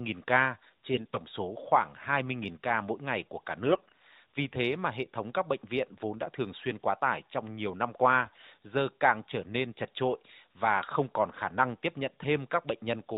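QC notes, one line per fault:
0.94–1.18 s, 3.67–3.92 s and 8.22–8.46 s, AMR bit errors: three short bursts of hoarse, scratchy, gargling speech. They fall just before "số khoảng", just after "mỗi ngày của cả", and between "tải trong nhiều năm" and "giờ càng trở nên". The weaker-protected bits in each AMR frame were corrupted at a rate of roughly 5 to 7 percent, yet the frames still passed their checksum. Because of this, pulse positions, fine gain and spectral values decode wrongly, and the sound roughly holds its pitch and level while its texture breaks up.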